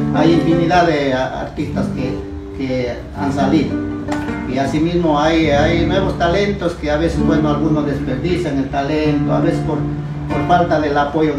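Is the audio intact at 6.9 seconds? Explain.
Yes, the audio is intact at 6.9 seconds, with no dropout, click, distortion or other fault at that moment.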